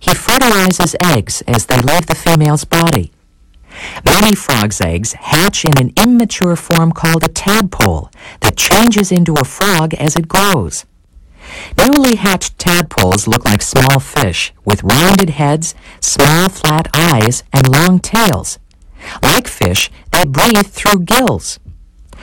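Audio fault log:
Throughout, integer overflow: the signal is driven about 8 dB past the integer ceiling, and instead of being limited the loudest peaks wrap around to the opposite extreme of the range. Only a small share of samples, around 2 percent, cross the limit, so the rest of the sound passes intact. But every crossing produces a full-scale jump in the waveform, heard as harsh, violent cracks on loud moments, far sharper and more abrupt than ordinary clipping.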